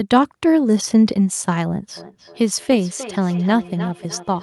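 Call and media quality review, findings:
Feedback echo between two devices, 1.97 s onward: discrete repeats roughly every third of a second, thinning each pass, about 16 dB down. A nearby device's mic recaptures playback. Unlike diffuse reverb.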